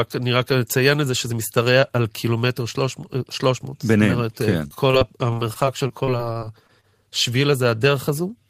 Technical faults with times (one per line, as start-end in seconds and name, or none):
4.67-6.85 repeated packet loss (robotic sound)